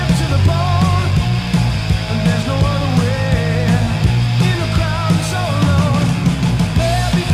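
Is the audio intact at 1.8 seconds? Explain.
No. At 1.8 seconds, as across the whole clip, a mains buzz sits under the sound, roughly 25 dB below it. Sharp switching spikes from a dimmer, rectifier or unshielded line enter twice per 60 Hz cycle, so the interference carries a dense comb of 60 Hz harmonics reaching several kilohertz. That gives a raspy, edged buzz rather than the smooth, low tone of plain hum, which stays near 60 and 120 Hz.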